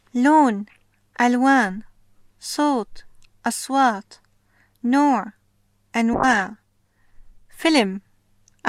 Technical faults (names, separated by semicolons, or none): call bitrate drop